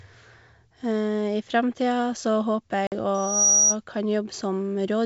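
At 2.87 s a hard-edged 50 ms hole cuts the speech, which returns slightly distorted: packet loss on an ADPCM call, leaving the decoder's predictor briefly out of step. From 3.14 s to 3.76 s a thin 5.8 kHz tone swells over roughly a third of a second to about 10 dB above the speech, a loudspeaker feedback squeal from a microphone picking up its own loudspeaker.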